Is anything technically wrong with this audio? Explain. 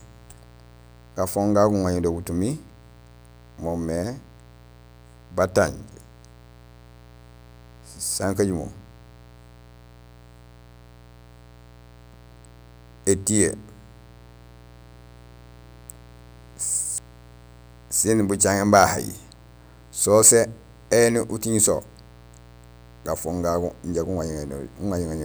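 Yes, there is mains buzz under the speech for the whole clip. It is a steady, raspy buzz sitting well below the voice, roughly 25 dB down. Something like a dimmer, rectifier or missing shield is letting sharp switching spikes onto the line twice per 60 Hz cycle, so harmonics of 60 Hz climb into the kilohertz range. On a spectrogram this shows as evenly spaced horizontal lines at multiples of 60 Hz. In the waveform, small spikes repeat 120 times per second.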